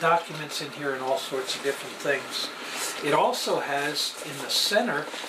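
A dropped buffer (overrun) occurs at 4.02 s: a few milliseconds of audio vanish and the two sides butt together with no gap, giving a small jump forward, most likely because samples were overwritten before the program collected them.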